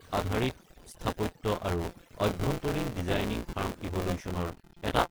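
Overdone noise removal runs through the whole clip. The noise reduction is set far too hard, pulling individual frequency bands down to nothing whenever they sit near its noise estimate. The background drops and breaks up into twinkling specks, and quieter parts of the speech vanish with it.

Buffer tearing is also present from start to finish, heard as a steady robotic buzz at 172 Hz that appears only while speech is sounding. That rate fits a 256-sample buffer. The writing and reading positions have drifted so they cross inside each period, and about a fifth of every buffer replays audio from around 20 ms earlier, with a hard join at each edge.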